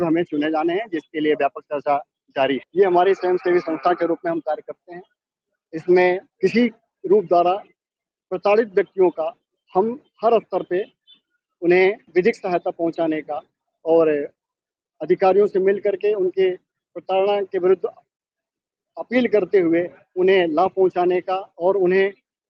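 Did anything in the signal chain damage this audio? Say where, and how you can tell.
No, nothing in the signal chain damaged it.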